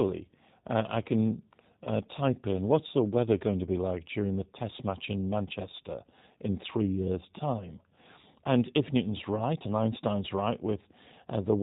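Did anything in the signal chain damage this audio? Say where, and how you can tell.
Yes. The codec stage is the main culprit: the whole clip has passed through a G.729 speech codec, most likely the G.729A variant. The speech has no content above 4 kHz and has a rough, slightly synthetic texture throughout, with plainly audible damage, which fits an 8 kbit/s coder. That texture comes from the decoder rebuilding each 10 ms frame from a vocal tract filter, a pitch predictor and a handful of pulses rather than the original waveform.

The network stage adds one brief fault, VoIP packet loss concealed by the speech codec, at 1.84 to 1.88 s, between "uh I can" and "type in what's the". About 20 ms of audio went missing, which fits a single lost packet. The decoder filled the gap by extending its last pitch and filter with falling gain, so the sound is briefly stretched into a buzzy tone or a coloured noise that fades. 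Because each frame builds on the one before, the speech stays weak or distorted for a moment after audio resumes.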